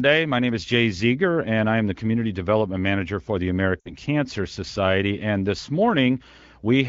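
Lost AMR speech frames occur from 3.79 to 3.95 s, just after "for the". About 60 ms of speech went missing, which fits three consecutive 20 ms frames failing their checksum. The AMR-WB decoder, running at 15.85 kbit/s with light coding damage, bridged the gap by repeating the last good pitch and vocal tract settings while lowering the gain. The sound smears briefly and quickly fades, then returns sounding weak or rough for a moment.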